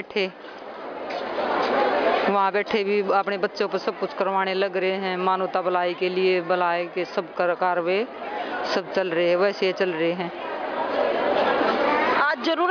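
No technical faults can be heard anywhere in this recording.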